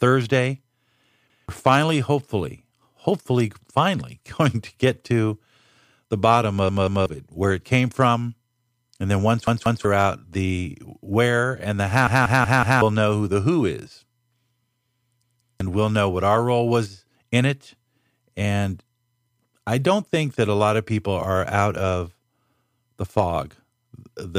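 Repeated buffers make the speech stutter at 1.3, 6.69, 9.47, 12.07 and 15.23 s. Late audio left the same 186 ms chunk replaying one to four times, hard-joined each time.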